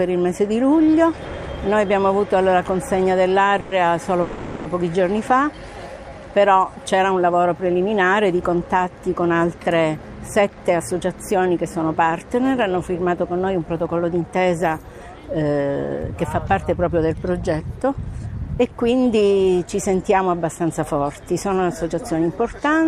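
At 3.60 to 3.73 s and again at 4.21 to 4.67 s there is a call audio freeze: the last sound carries on as a fading buzz for about 110 ms, then about 440 ms, most likely because delayed packets let the jitter buffer run dry. Unlike a dropout, nothing is lost; the audio resumes where it stopped, just later.

Jitter buffer speed-up follows at 9.97 to 11.14 s (109 %), 13.53 to 14.37 s (110 %) and 18.85 to 19.22 s (112 %). Short pitch-period pieces are trimmed to shrink an overfull buffer, roughly a tenth of a second each time in the first two and half that in the last. The sound hurries, but its pitch stays put, which sets it apart from a simple playback-rate change.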